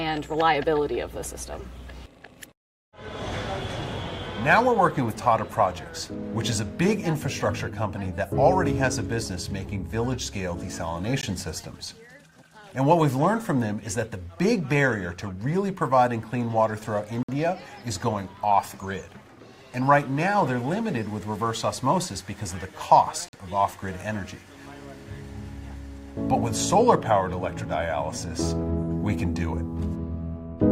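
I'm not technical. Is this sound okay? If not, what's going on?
No. There are three brief dropouts to silence, at 11.21 s, 17.23–17.29 s and 23.29–23.33 s, each cut off sharply. This is a gap between stream segments: the audio arrives in six-second chunks, and their timing leaves small holes that the player fills with silence. Nothing is missing; the sound just pauses.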